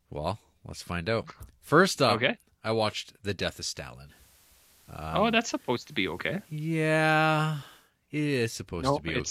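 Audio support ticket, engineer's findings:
Digital radio blending to analogue, 4.03–7.92 s. Hiss rises to roughly 35 dB below signal, level shifts about 2 dB. Hybrid tuner lost digital lock, cross-faded over 174 ms to FM simulcast, later back. Reception/tuner path.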